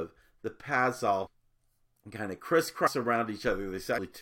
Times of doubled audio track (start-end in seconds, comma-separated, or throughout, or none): none